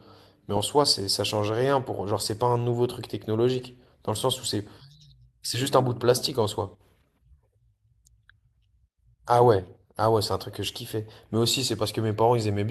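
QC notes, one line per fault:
No audible technical faults found.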